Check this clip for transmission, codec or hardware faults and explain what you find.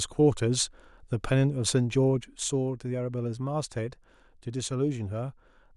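One channel drops out at 2.24 s and stays gone to the end. Losing one side of the stereo pair before the mono sum is the likely cause: the speech common to both channels falls abruptly by about 6 dB, and anything carried only on the lost side vanishes.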